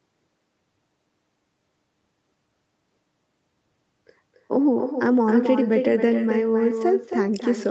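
From start to finish, the speech carries an echo with no canceller. The far end is playing the call through a loudspeaker. Its microphone picks that sound up and sends it straight back, and nothing strips it out. Each phrase returns around a third of a second later, only about 7 dB quieter. The copy sounds thinner than the original, like a second voice trailing behind. It stays within the call path's 8 kHz bandwidth.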